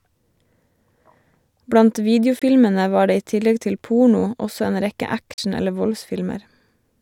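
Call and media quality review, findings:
Bluetooth dropout at 2.39 s (20 ms, before "var det i tillegg") and 5.33 s (41 ms, after "porno også en rekke"). Flat waveform, full-band spectrogram gap. Likely late packets dropped on the wireless link; playback resumes as if it had continued.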